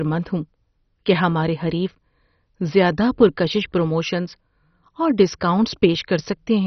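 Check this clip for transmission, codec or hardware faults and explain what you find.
Heavy codec damage runs throughout this speech, most likely MP2 compression: starved sub-bands leave nothing above 6.1 kHz, giving dull, gurgling, granular speech that fits a 32 kbps bitrate.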